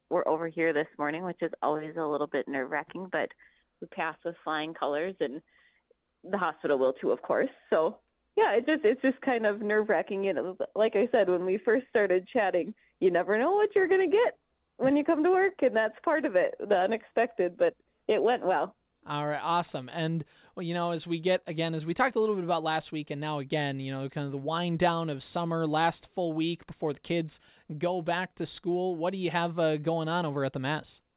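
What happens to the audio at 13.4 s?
Nothing goes wrong at 13.4 s: the audio carries on intact through that moment, still showing the narrow telephone-band sound of the call path, with nothing above 4 kHz.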